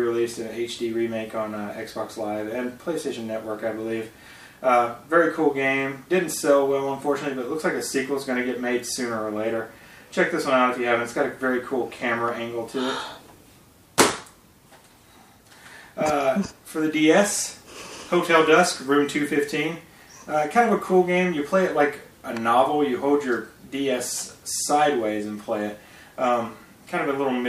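Nothing in the audio stood out as a technical problem on listening.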